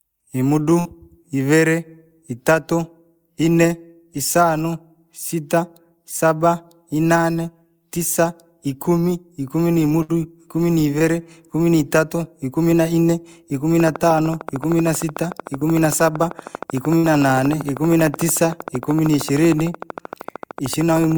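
At 0.79 to 0.97 s, a burst of packet loss: about 60 ms of speech never arrived, and the receiver stretched the last sound for roughly 56 ms as a fading buzz or hiss before jumping ahead. Unlike a dropout to silence, the gap is filled, and the speech resumes with a piece skipped. The same happens at 10.02 to 10.11 s, with 64 ms filled.

At 10.99 to 11.02 s, a short concealed packet loss leaves only a brief smear or wobble. About 20 ms went missing and was patched in roughly 14 ms, too short to be heard as a held buzz.

From 13.8 s to the end, a train of clicks ticks evenly at 13.1 per second, peaking around 10 dB above the speech and audible in pauses too. That steady, identical pattern separates it from packet loss, and points to likely interference from nearby equipment or a faulty connection or power supply.

At 15.60 to 15.65 s, another short concealed packet loss briefly smears the sound. 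At 16.98 to 17.11 s, another burst of packet loss turns 60 ms of missing speech into a 54 ms fading continuation.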